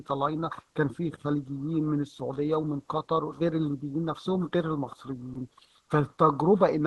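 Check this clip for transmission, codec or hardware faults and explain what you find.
One fault stands out. From 5.33 to 5.35 s, about 20 ms of speech gives way to flat noise. This is likely sound dropped by the voice detector, fitting Opus DTX. Unlike packet-loss concealment, the gap holds steady noise rather than smeared or repeated sound.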